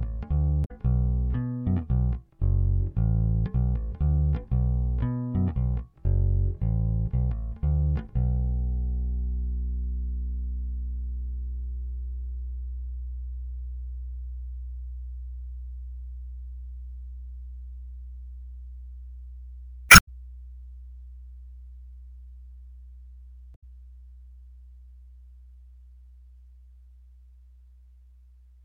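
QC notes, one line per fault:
0.64–0.71 s, 19.87–20.09 s and 23.54–23.63 s, damaged data in a compressed stream: corrupted bytes make the decoder misread frames and lose sync while it hunts for the next frame header, so each spot breaks into a brief garbled chirp or blip, the longest near 20 s.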